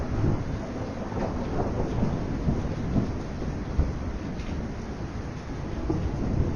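From start to finish there's a dull, gurgly, granular quality, likely MP2 compression at a low rate, something like 80 kbps. Upper sub-bands keep dropping in and out, and what remains is coarsely quantised, so the top end flickers throughout.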